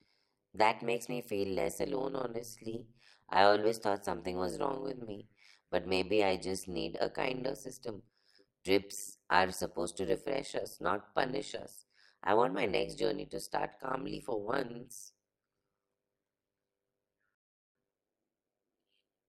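From start to finish the speech carries a harsh, buzzy flutter, a rough robotic tremolo cycling around a hundred times a second, with the level dipping by about 60 dB on each cycle. This is overlap-add ripple. The audio was split into windowed frames and rejoined with an overlap whose windows do not add up to a steady gain, so the loudness swells and collapses once per frame, at roughly the frame rate.

At 17.35 s the sound drops abruptly into silence, and at 17.75 s it picks up again from exactly the point where it broke off, with nothing skipped. This is a rebuffering stall. The player used up its downloaded audio and halted until more data arrived, then resumed. No material is lost, but the gap adds about 0.4 s of dead air to the running time.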